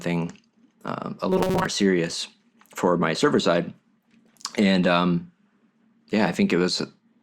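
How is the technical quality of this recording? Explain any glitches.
A single glitch affects the recording: robotic sound from repeated short buffers, from 1.30 to 1.66 s. The speech becomes a rigid, metallic buzz pinned near 188 Hz that still roughly follows the words. The likely cause is audio arriving too seldom, so a segment of about 5.3 ms was replayed over and over, its repeat rate fixing that pitch, while most of the real audio in that stretch was skipped.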